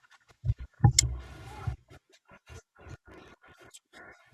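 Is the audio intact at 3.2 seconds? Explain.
No. From 2.86 to 3.61 s a block size mismatch (truncated) drops each block's tail, consistent with 1024-sample writes, causing a 50 Hz buzz and speech running 1.07 times fast.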